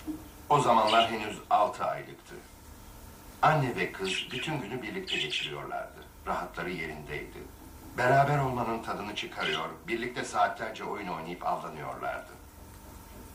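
No technical faults can be heard anywhere in the clip. No dropouts, clicks, distortion or level jumps interrupt the audio at any point.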